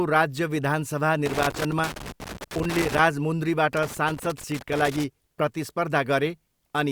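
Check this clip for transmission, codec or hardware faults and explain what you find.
Two bursts of loose connector crackle, from 1.26 to 2.99 s just after "राज्य विधानसभा", and from 3.73 to 5.04 s. A worn contact repeatedly breaks and remakes the speech path, giving irregular scratchy crackle, unlike the clean-edged gaps of packet loss.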